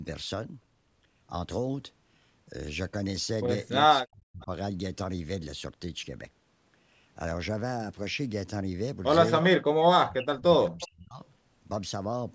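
From 3.88 to 4.5 s the speech dips by as much as about 40 dB, with roughly 0.4 s of it lost, in what is likely speech suppressed in double talk: with both sides talking, the echo canceller muted the near talker along with the echo. At 4.41 s an echo leak returns a faint copy of the speech, about 30 dB down and delayed 339 ms, most likely from loudspeaker pickup the canceller failed to remove. Further leaks follow at 9.41 s (about 15 dB down) and 10.8 s (about 20 dB down). From 10.04 to 11.2 s suppression cuts the speech again, by up to about 40 dB across roughly a second. The audio stops at 8 kHz throughout.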